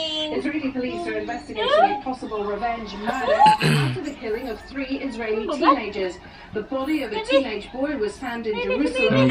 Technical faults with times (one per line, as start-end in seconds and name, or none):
7.61 dropped samples